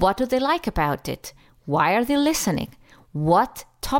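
Listening to this short speech recording, nothing technical stood out at any point.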